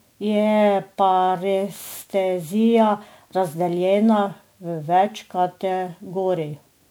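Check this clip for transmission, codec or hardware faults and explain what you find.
One codec fault runs through the whole speech recording: generation loss. The likely cause is that the audio went through an MP3 encoder many times, around seven passes, with a character that fits a modest setting near 128 kbit/s. Each decode and re-encode quantises the sound again on a shifted frame grid, so coding noise and spectral gaps pile up. The result is swirly, hollow and smeared beyond what one pass at that rate would give, with consonant attacks blurred.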